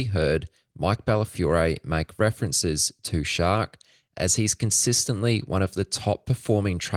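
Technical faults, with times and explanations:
Nothing to flag here; this speech clip comes through without a single technical fault anywhere in it.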